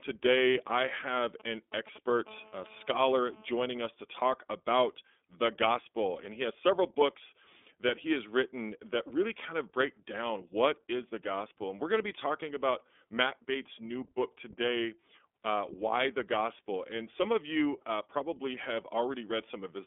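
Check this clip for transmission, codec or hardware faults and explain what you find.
Two faults are present in the speech. An iLBC codec shapes the whole clip, and a GSM phone buzz cuts in briefly near the start.

iLBC codec, throughout. Each 30 ms frame is coded independently, with no help from the previous frame. The audio sits in a telephone band of roughly 250 Hz to 3.5 kHz. Nothing passes above 3.8 kHz. Codec damage is plainly audible. The speech sounds rough and synthetic. The sound fits the 13.33 kbps iLBC mode.

GSM phone buzz, from 2.27 to 3.87 s, ending just before "to talk about the". A nearby 2G phone on a call transmits in bursts about 217 times a second. The audio circuit rectifies those radio pulses. The result is a hard, raspy buzz at 217 Hz, rich in harmonics. It holds steady while it lasts, about 24 dB below the speech. It has no relation to the speech itself.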